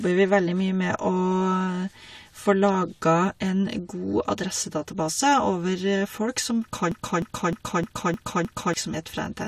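From 6.92 to 8.74 s a 306 ms fragment repeats exactly six times, a broken-record loop likely from a stalled stream; unlike echo, nothing fades.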